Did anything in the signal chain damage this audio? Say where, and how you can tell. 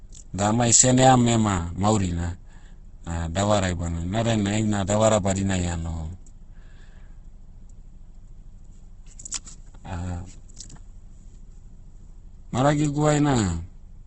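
Yes, at the codec. Throughout, the speech is grainy and rough, with nothing above 8.1 kHz. Likely Opus compression near 12 kbps, noise-filling starved bands.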